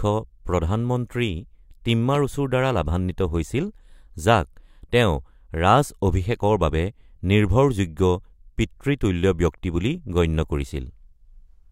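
At 2.15 to 2.17 s, just before "পৰা লাভান্বিত হৈছিল", a single loud pop cuts through the speech, peaking around ten decibels above it. A sudden voltage pulse, likely from a plug, switch or static discharge, was added to the signal and shaped into a brief thump. Unlike a dropout or buffer glitch, nothing is missing: the speech carries on unbroken beneath the pop, which is one short burst, not a repeating tick.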